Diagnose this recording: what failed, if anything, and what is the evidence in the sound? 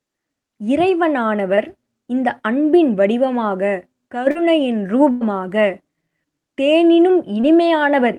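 Short concealed packet loss at 1.55–1.59 s, 4.31–4.37 s and 7.41–7.45 s, a network fault: roughly 20, 40 and 20 ms of speech arrived too late, and the decoder extrapolated the preceding sound to bridge each hole, leaving brief smears or wobbles before the real signal returns.

Burst of packet loss at 5.11–5.23 s, also on the network: about 100 ms of consecutive audio went missing. The Opus decoder stretched the last sound into a held buzz or hiss that fades, then resumed later in the speech with that stretch gone.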